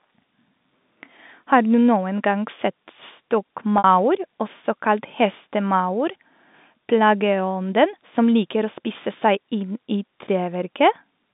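Packet loss with pitch repetition hits this speech clip at 3.78 to 3.84 s, a 60 ms gap that fits two lost packets. Rather than leaving a hole, the receiver bridged it by replaying the last pitch period of the sound, so the gap comes across as a briefly held, slightly buzzy tone that fades out before normal audio resumes. The G.711 telephone coding around it limits the sound to roughly 150 Hz to 3.7 kHz.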